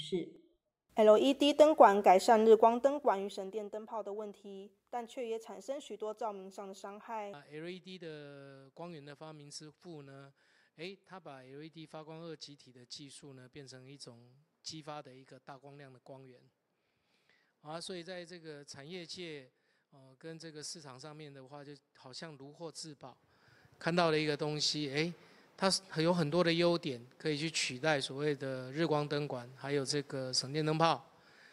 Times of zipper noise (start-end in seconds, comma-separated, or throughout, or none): 2.47-3.80